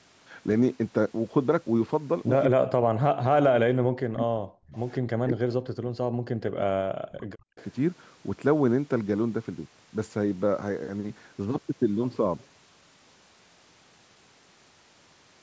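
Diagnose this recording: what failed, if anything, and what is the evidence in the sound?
The call processing stage is where this goes wrong. From 2.47 to 4.75 s and again from 5.23 to 7.59 s the speech sinks by up to about 40 dB, roughly two seconds each time. That's likely speech suppressed in double talk, with the echo canceller ducking everything while the far end talked over it.

Right at 7.59 s, as the second dip ends, there's a brief echo leak. It's a faint delayed copy of the voice, lagging about 205 ms and sitting around 25 dB under the speech. It's likely the canceller on a speakerphone end letting a scrap of loudspeaker pickup slip back through.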